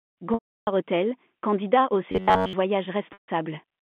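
Packet loss with pitch repetition at 0.34–0.67 s (about 330 ms) and 3.13–3.28 s (150 ms): a held, buzzy copied cycle fades to silence, visible as identical decaying waveform periods before a flat gap. After "candidat au", 2.12–2.53 s carries a robotic sound, likely from repeated short buffers: a rigid 94 Hz metallic buzz, shown as evenly spaced horizontal harmonic stripes, under the G.711 telephone band.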